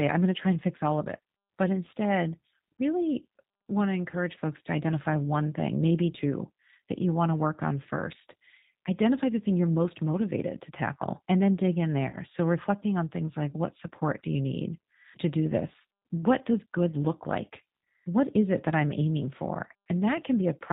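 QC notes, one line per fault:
Throughout: G.729 codec. The speech is carried by a low-rate model-based coder, which fits an 8 kbit/s G.729A stream, so nothing above 4 kHz survives. The rebuilt excitation leaves the speech plainly rough, thin and synthetic-sounding.
12.09–12.18 s: VoIP packet loss concealed by the speech codec. Just after "and then dig in", a gap of about 40 ms, which fits two lost packets, is filled from the decoder's last pitch and filter settings. This produces a brief stretched sound that fades, and the speech recovers only weakly afterwards.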